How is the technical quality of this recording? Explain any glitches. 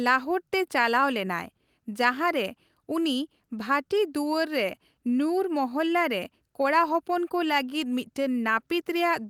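The speech carries a faint, recurring unevenness in its pacing throughout, caused by clock drift between sender and receiver together with the repeated timing corrections it forces.

Clock drift between sender and receiver runs for the whole clip. The rhythm never sits quite steady. The sender's clock runs about 3 percent slow relative to the receiver's, so the jitter buffer keeps draining and must be topped up to avoid running dry.

Repeated timing corrections fill the span from 0.33 s to 8.69 s, where small hiccups land at uneven intervals and the pace feels slightly dragged, near 97 percent speed. The receiver repeatedly duplicates short slices of audio, all stretching time, adding roughly a fifth of a second overall.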